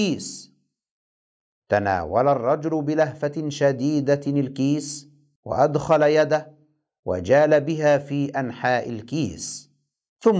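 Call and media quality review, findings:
Nothing stood out on listening to the speech in this clip, and no finding is raised against it.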